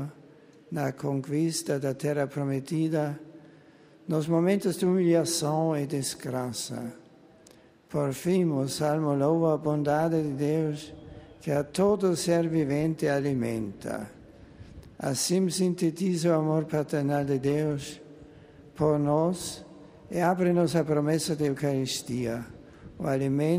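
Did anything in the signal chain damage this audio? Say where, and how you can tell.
No, nothing audible points to damage at any stage of the chain between capture and playback.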